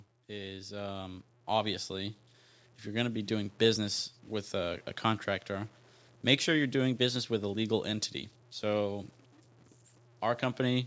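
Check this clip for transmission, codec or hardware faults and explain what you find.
Two faults are present in this speech.

Throughout the clip, low bit depth without dither is likely at work: truncation to what sounds like about 9 bits leaves an error that tracks the signal, roughly 35 dB below it, so quiet passages turn gritty.

From 0.25 to 5.77 s, automatic gain rising occurs. The gain control judges the input too quiet and lifts it by about 10 dB, so voice and background swell together until just before "make sure you're doing".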